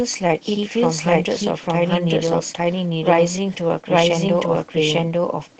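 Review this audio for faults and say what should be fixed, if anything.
A doubled audio track runs through the whole clip. A second copy of the speech, about as loud as the first, trails it by roughly one second. It has no decay or room colour. The likely cause is a second capture path or a misaligned edit. Check routing and edits so each source is recorded once.

Opus voice compression also runs throughout. The band stops near 8 kHz, and the speech sounds plainly muffled, hoarse and slightly robotic. That fits the SILK voice coder at a low bitrate around 12 kbps, which codes the excitation coarsely. Encode at a higher bitrate to avoid this.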